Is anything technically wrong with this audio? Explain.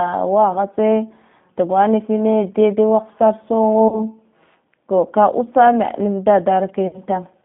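Yes. G.729 codec damage runs throughout. The speech is rebuilt from a vocal-tract filter and sparse pulses, which fits an 8 kbit/s codec. It sounds plainly rough and synthetic and is confined to about 150 Hz to 3.6 kHz.

VoIP packet loss concealed by the speech codec occurs at 3.88 to 4.01 s, with about 40 ms missing, and at 6.87 to 6.98 s, with about 60 ms missing. The decoder stretches its last pitch and filter at falling gain, so each gap becomes a fading buzzy or noisy smear that stays weak briefly after sound resumes.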